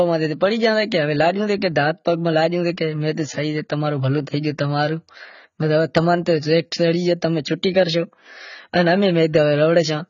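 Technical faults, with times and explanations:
Throughout, AAC compression: the speech is dull, with nothing above 7.1 kHz, and sibilants and held vowels carry a warbling, fizzy smear. This is likely heavy AAC-LC coding, whose low cut-off and coarse quantisation of each frame's spectrum fit a rate around 16 kbps.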